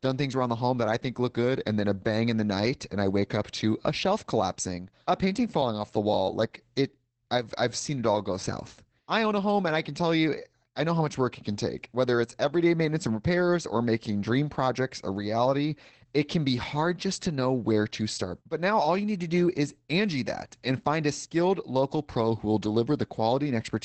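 Throughout the speech, Opus voice compression is plainly audible. The SILK linear-prediction coder, at what sounds like about 12 kbps in wideband mode, leaves voices muffled, hoarse and slightly robotic. A spectrogram shows a hard ceiling near 8.7 kHz, with nothing above it.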